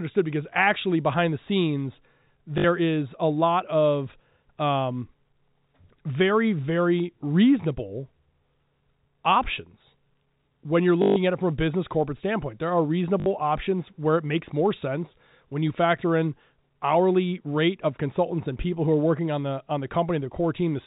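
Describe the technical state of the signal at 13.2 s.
From 13.2 to 13.26 s, just before "options where it makes", there is packet loss with the last packet repeated: 60 ms of lost audio was filled by replaying one chunk, which fits three 20 ms packets. It sounds like a brief robotic stutter buzzing near 50 Hz. The waveform shows identical blocks repeating, and the spectrogram shows frozen harmonics, all below the 4 kHz ceiling of the G.711 telephone band.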